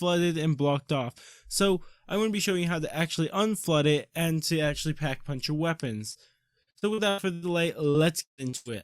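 Short concealed packet loss occurs at 6.11 to 6.18 s. About 40 ms of the stream never reached the decoder in time. The receiver covered roughly 33 ms of that hole by extending the preceding sound, as pitched continuation if voiced or shaped noise if not, then blended back into the real audio. The result is a brief smear or wobble at that spot.

Repeated packet loss (robotic sound) follows in two stretches. From 6.63 to 7.45 s there are six gaps, the longest 82 ms, with about 38% of the span concealed. From 7.90 to 8.71 s there are four gaps, the longest 153 ms, with about 40% concealed. Each time, audio arrived late or not at all. Every hole was patched by continuing the last sound, only for the next to follow shortly, leaving choppy sound with pieces missing.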